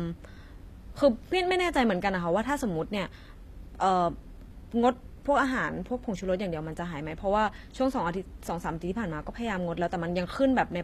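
From start to finish, the treble has a synthetic edge. Sibilants come out gritty and lispy, with a metallic sheen. Nothing is heard above about 14.9 kHz. The likely cause is HE-AAC compression at a low rate, which fits roughly 24 kbps. The coder keeps only the lower spectrum. It rebuilds the top by copying lower bands upward under a coarse envelope. Those copied harmonics miss the real ones, so the speech highs sound bright but false.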